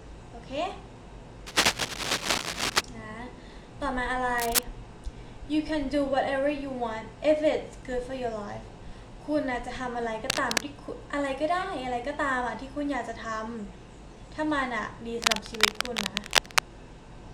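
Cable scratch noise, from 1.47 to 2.81 s, 4.38 to 4.63 s, 10.30 to 10.63 s and 15.22 to 16.79 s. Dense, uneven scratching sits over the sound, mostly louder than it. The likely cause is a worn cable or connector being moved.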